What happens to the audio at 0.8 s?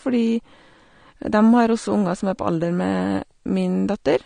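At 0.8 s the speech is dull and smeared, with a warbling, fizzy edge on sibilants, and nothing sounds above about 9.7 kHz. This runs through the whole clip, not just that moment. The likely cause is AAC compression: the encoder quantises each frame coarsely, leaving spectral holes and lowering the cut-off, which fits a low bitrate near 32 kbps. A simple low-pass filter would also remove the top, but it would leave the remaining sound clean rather than watery and swirling.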